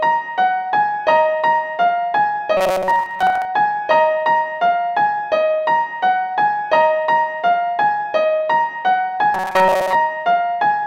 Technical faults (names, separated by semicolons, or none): robotic sound from repeated short buffers